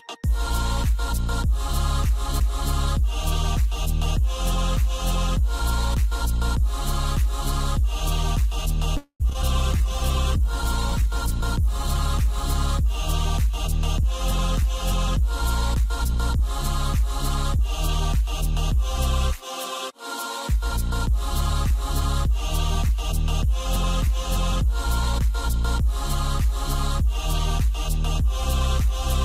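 A call audio freeze at 8.97 to 9.22 s stretches the sound into a fading buzz that drops to silence for about 90 ms before resuming where it stopped. This likely comes from delayed packets draining the jitter buffer, adding 223 ms of delay with nothing lost. Short concealed packet loss follows at 9.30 to 9.33 s, 9.33 to 9.36 s and 9.42 to 9.45 s. About 20 ms, 20 ms and 40 ms never reached the decoder in time, and extrapolated fill bridges each hole as a brief smear or wobble. The last loss trims roughly 40 ms from the delay. A call bitrate drop from 9.54 to 13.67 s cuts the encoder from 64 to 20 kbps, bottoming out for about 2.3 s. Coarser Opus coding and lost high frequencies make the sound rough and muffled until the rate recovers. Jitter buffer slow-down runs from 9.77 to 11.62 s, with repeated pitch periods adding 48 ms so the audio plays at 98% speed and unchanged pitch while the buffer refills. 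Jitter buffer speed-up from 13.38 to 25.24 s removes short pitch-period pieces, around 200 ms in total, running the sound at 102% speed at the same pitch to shed excess delay.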